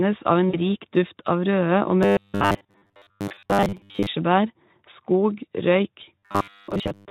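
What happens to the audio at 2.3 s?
At 2.3 s the audio is inside a stretch of robotic sound from repeated short buffers, running from about 2.03 to 4.07 s. It becomes a rigid, metallic buzz locked at 100 Hz, which fits a 10 ms buffer, and most of it is repeated fill. The likely cause is audio arriving too seldom, so playback loops the last few milliseconds while real audio is dropped. Unlike heavy Speex coding, which turns speech hoarse and noisy, this buzz holds a fixed pitch.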